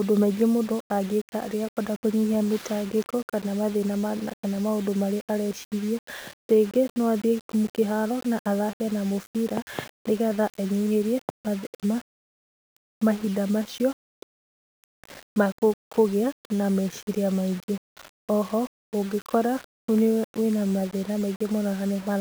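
Speech with grainy distortion throughout that follows the speech and drops out or sputters in pauses instead of hissing steadily. This is likely low bit depth without dither, consistent with roughly 6-bit rounding.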